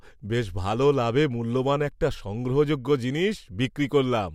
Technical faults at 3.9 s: none

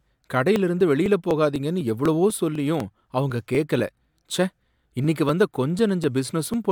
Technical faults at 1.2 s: periodic USB or driver dropouts

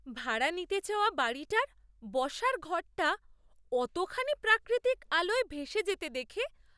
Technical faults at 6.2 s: none

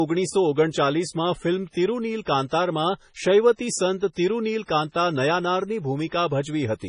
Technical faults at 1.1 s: MP3 compression

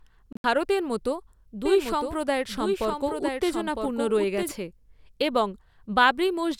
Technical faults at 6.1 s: none

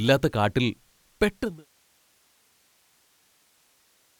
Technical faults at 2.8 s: none

